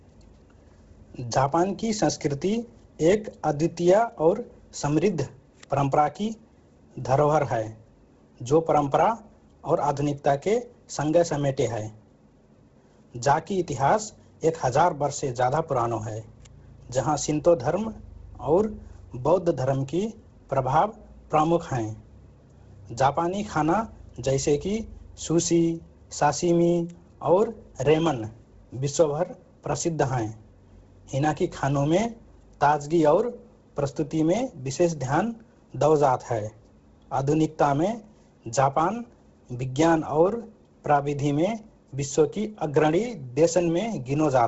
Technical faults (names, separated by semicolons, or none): Bluetooth LC3 compression